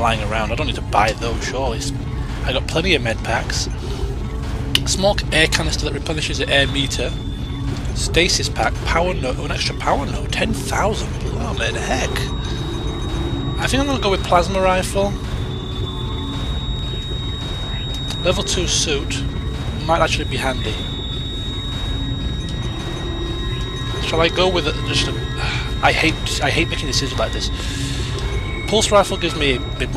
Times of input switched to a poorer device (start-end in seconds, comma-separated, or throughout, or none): none